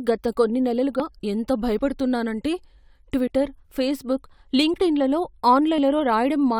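Samples were likely overwritten before being collected, a dropped buffer (overrun), at 1.00 s just after "గత కొన్ని", then 1.79, 3.27, 4.76 and 5.78 s. At each splice the speech jumps ahead, by about 70 ms at the first and last, and about 20 ms elsewhere.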